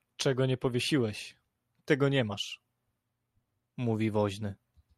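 Nothing in this speech recording stood out as a technical problem on listening.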